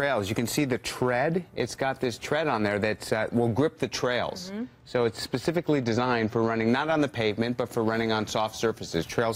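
From 4.58 to 6.68 s the sound turns dull, the mark of channel delay (comb filtering): one channel lags by about two samples, so summing to mono cancels the top end, with the first notch around 10 kHz. A spectrogram shows a fixed dark band there.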